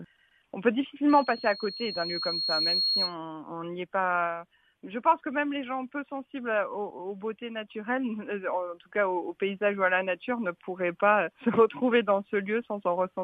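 Loudspeaker feedback squeal runs from 1.09 to 3.15 s. A microphone is hearing the loudspeaker it drives, and at 4.3 kHz the round trip through the loop returns more than it sends, so that one frequency feeds on itself. It rises as a pure, piercing whistle over roughly a second and a half, until it sits at about the same level as the rest of the sound, then stops.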